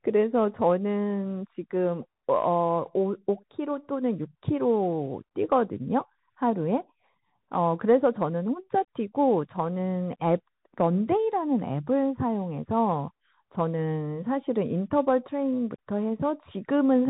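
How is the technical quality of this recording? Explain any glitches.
The quality is poor for the whole clip. The speech has gone through a Bluetooth CVSD headset codec. Nothing above about 3.8 kHz survives, so everything sounds narrowband and boxy. CVSD codes each sample as a single up-or-down bit, which fits a 64 kbps link, and adapts its step size as it goes. The damage is plainly audible: loud high-frequency bursts outrun the step and distort, s sounds come out scratchy, and a grainy hiss sits under the speech.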